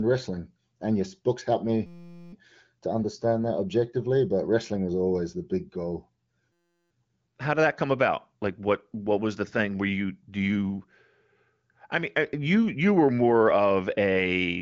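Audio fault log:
1.86 to 2.33 s and 6.53 to 6.91 s, system hang loop: both times the playback locks up and a tiny slice of speech, about 5.8 ms long, repeats back to back, roughly 80 and 66 passes. At that length the repeats fuse into a steady buzz at about 172 Hz instead of a stutter, which fits a 256-sample buffer cycling while the driver is frozen. Essentially no speech goes missing around either hang. The AMR-WB band limit leaves nothing above about 7.5 kHz right through these stretches.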